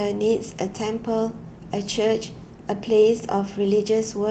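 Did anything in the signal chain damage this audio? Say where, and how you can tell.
No, nothing in the signal chain stood out as damaging this speech on listening.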